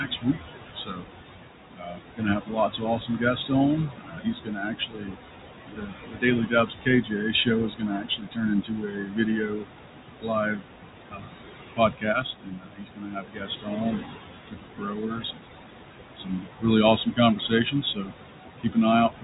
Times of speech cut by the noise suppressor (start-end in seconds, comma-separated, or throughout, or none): 0.06-19.24